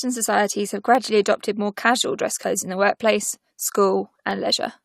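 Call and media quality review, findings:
Clock drift buffer slips, likely from two devices on independent clocks. Regular click roughly every 1.12 s, 0.95 to 4.31 s after "societies have", about four slips of a few samples each.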